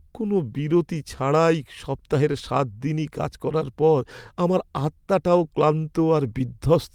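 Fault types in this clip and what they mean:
Clock drift between sender and receiver: the sending side's audio clock runs about 2% slow against the receiver's, so the jitter buffer keeps draining. Unlike a packet-loss dropout or a single glitch, the disturbance never settles; small timing hiccups persist for the whole speech clip.
Repeated timing corrections: from 0.12 s to 6.68 s the receiver keeps repeating short slivers of sound to stretch the stream, adding roughly a tenth of a second and running at 99% speed. The hiccups are all lengthenings, unevenly spaced, unlike periodic stutter or steady pitch-shifting slowdown.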